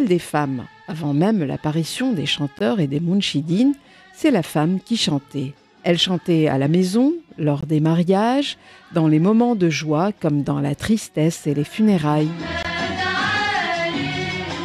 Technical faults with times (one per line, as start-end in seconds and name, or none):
2.59-2.61 gap between chunks
7.61 gap between chunks
12.63 gap between chunks